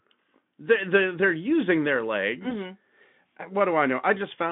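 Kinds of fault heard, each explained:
VoIP packet loss concealed by the speech codec: just after "they're they're using their", at 2.49 to 2.55 s, a lost 20 ms stretch is bridged by repeating the last pitch and filter at falling gain. It sounds like a brief smear that fades. The spectrogram shows frozen, fading harmonics, and the waveform shows repeating, shrinking cycles.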